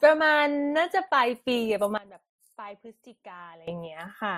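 From the start, the speech carries two layers of coding damage, the artefacts of each heard together, with nothing above 15.9 kHz anywhere in the clip. That combination points to transcoding between lossy codecs, likely an MP3 encode at a modest rate later re-encoded to Opus at a similar rate. The second encoder wastes bits reproducing the first one's artefacts, adds its own, and keeps the earlier band limit.

At 1.98 s the level drops abruptly by about 18 dB, with the speech and the background noise falling together in a single step and no fade. It stays down until 3.68 s, then jumps straight back up. This sudden gain jump sounds like a hard switch in loudness, with a possible click at each edge. The likely cause is a digital gain change applied instantly rather than ramped.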